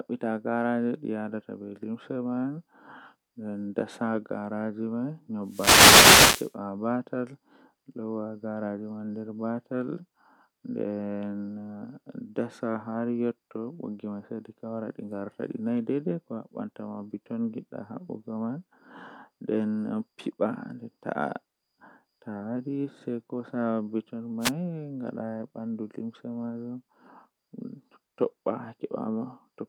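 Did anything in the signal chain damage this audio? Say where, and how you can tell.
Yes, a wireless microphone noise hit, twice: a burst of static from 5.43 to 6.56 s and a short swish at 24.40 to 24.52 s. It comes from the analogue radio link, ahead of the converter. Reflections cancel the FM signal and receiver noise surges.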